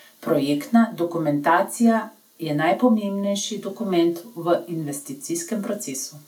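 No faults are audible anywhere in the recording.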